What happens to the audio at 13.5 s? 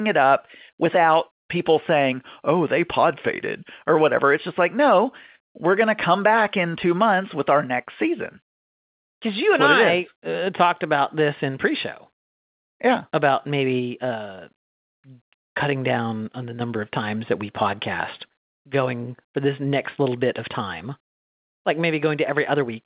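Nothing goes wrong at 13.5 s: the speech carries on intact through that moment, with only the ordinary narrow, band-limited sound of G.711 telephone coding.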